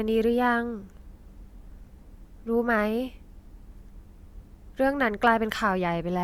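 At 4.87 s a DC step shifts the waveform's zero line, then decays through a 2 Hz high-pass, producing one low thump.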